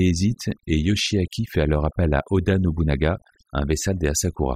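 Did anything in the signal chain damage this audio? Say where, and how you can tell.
Yes. Overdone noise removal runs through the whole speech clip, which places the damage at the processing stage, where a noise suppressor was set far too aggressively. The background drops and breaks up into twinkling specks as individual frequency bands flicker off and on around the noise estimate. Quieter parts of the voice fall under that threshold and get pulled down with the noise.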